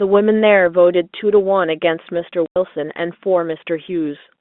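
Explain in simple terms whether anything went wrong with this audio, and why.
Packet loss filled with silence: at one point, a run of audio packets never reached the receiver, and it played silence in their place. From 2.46 to 2.56 s, the speech drops out for about 100 ms, a length that fits five lost 20 ms packets. The gap starts and stops abruptly. The narrow, telephone-like sound of the G.711 line is heard throughout.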